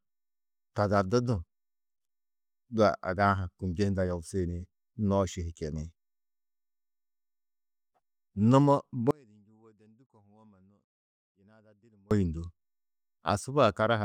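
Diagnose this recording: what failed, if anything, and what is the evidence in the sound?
At 9.11 s the speech drops out abruptly and doesn't return until 12.11 s, so you get an audio dropout to a faint residue lasting about 3.0 s. The gap isn't true silence. A faint sound sits roughly 35 dB down, and it switches in and out hard instead of fading. The chain after the break clearly stayed live, so the likely culprit is the analogue wiring, such as an intermittent connection briefly losing the feed.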